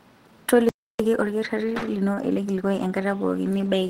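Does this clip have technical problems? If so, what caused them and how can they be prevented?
Yes. A playback stall silences the speech from 0.69 to 1.00 s, about 0.3 s, most likely because the player's buffer ran dry or its thread was blocked before output resumed. Keeping a larger playback buffer and giving the audio thread priority would prevent this.

Time-compressed catch-up follows from 1.00 to 3.08 s. The player trims its backlog by cutting and cross-fading small segments, so speech runs about 1.15 times fast at normal pitch. Avoiding the stall, or draining the backlog more gently, would prevent this.

Two short stalls from a late packet occur at 1.78 to 1.83 s and 2.15 to 2.18 s. The jitter buffer ran empty, and the receiver held the last sound for 32 ms and 20 ms until each packet arrived, with nothing lost. A deeper adaptive jitter buffer would absorb these late arrivals.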